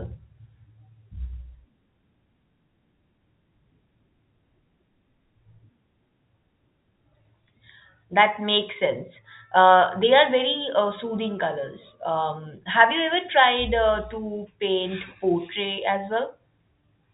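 No technical faults occur anywhere in this speech, which comes through the fixed-line telephone coding as that coding normally sounds.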